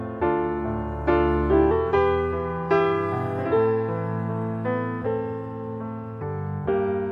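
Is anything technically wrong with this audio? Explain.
Yes. From 1.71 to 6.22 s there is a section at the wrong speed, running 1.14 times too fast, likely from playback against a mismatched clock. Pitch rises about two semitones and timing hurries. On a spectrogram, harmonics shift upward across that span; the waveform looks compressed in time.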